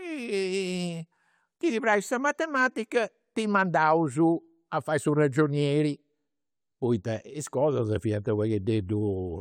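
No dropouts, clicks, distortion or other technical faults can be heard anywhere in the recording, and the signal holds steady throughout.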